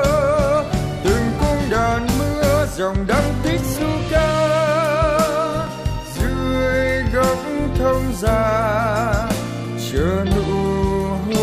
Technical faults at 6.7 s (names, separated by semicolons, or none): none